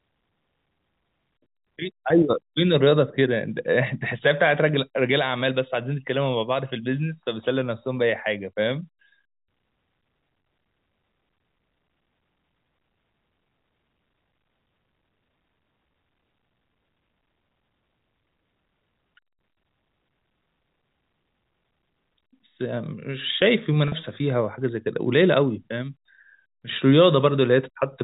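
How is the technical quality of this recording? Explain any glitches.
The speech carries two brief packet loss glitches, masked by pitch repetition. The first runs from 10.42 to 10.44 s and lasts 20 ms, which fits one lost packet. The second runs from 23.88 to 23.92 s and lasts 40 ms, which suggests two lost packets. Each time the receiver repeats the last pitch period to fill the hole. It sounds like a brief, slightly buzzy hold on the voice. The voice is band-limited to telephone range, as expected from G.711 coding.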